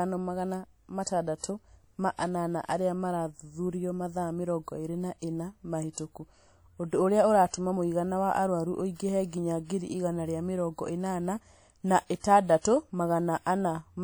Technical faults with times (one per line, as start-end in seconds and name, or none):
0.00-14.04 WMA compression
1.04-1.07 pre-echo
5.93-5.97 pre-echo
7.48-7.53 pre-echo
12.20-12.24 pre-echo